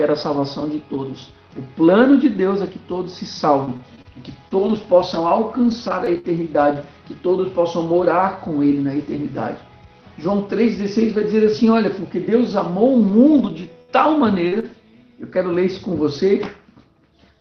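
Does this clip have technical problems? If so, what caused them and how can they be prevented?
Yes. Between 3.65 and 6.76 s there are scattered short gaps: around seven brief holes, the longest roughly 70 ms, where lost or late audio was patched by stretching the preceding sound. Each patch comes across as a small tick, smear or hiccup. On a spectrogram these appear as short vertical bands where the texture freezes or blurs, and the waveform shows brief repeated or flattened stretches. A larger jitter buffer and forward error correction would prevent most of them.

From 13.08 to 14.64 s, repeated packet loss (robotic sound) sets in: three gaps in quick succession, the longest 64 ms, with 124 ms filled in. Because each concealment is followed soon by another, the sound turns choppy. A spectrogram shows smeared, comb-like harmonic streaks repeating at short intervals, and the waveform shows periodic, looped-looking segments. 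A more stable network path, with FEC or redundancy enabled, would prevent this.

The audio runs through an Opus call path, and its content stops around 6 kHz, which fits a low bitrate of about 20 kbps.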